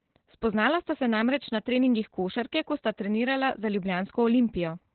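Opus voice compression affects this speech clip from start to finish: the audio is band-limited to narrowband, with nothing above about 4.3 kHz, which fits an 8 kbps SILK setting. Heavy coarse coding of the excitation leaves the speech muffled, hoarse and slightly robotic throughout.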